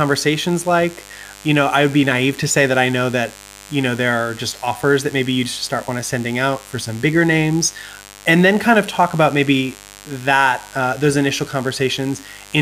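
A steady, raspy mains buzz sits under the speech for the whole clip, roughly 25 dB below it. It is built on 50 Hz, with sharp spikes arriving twice per mains cycle, and their harmonics climb to several kHz, giving the sound its edge rather than a smooth hum. That points to interference leaking in from a dimmer, a rectifier or a missing shield.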